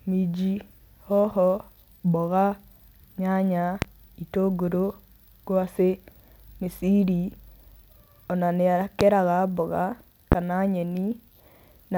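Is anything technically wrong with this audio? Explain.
Yes. Three loud pops cut into the speech, at 3.82–3.86 s, 9.01–9.05 s and 10.32–10.36 s. Each is a single sharp hit, about 20 dB above the signal. The likely cause is a sudden voltage pulse, from a plug, switch, static or driver glitch. The speech continues underneath.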